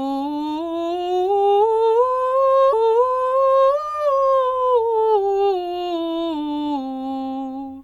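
At 2.72 s the music jumps back and replays a stretch it has already played, running until about 3.72 s. That's a stream segment repeated: the player fetched or queued the same chunk twice, so roughly a second of music, about 1.0 s, gets added. You'll hear a small blip at the jump back, then a déjà-vu moment where the passage plays again before the stream carries on.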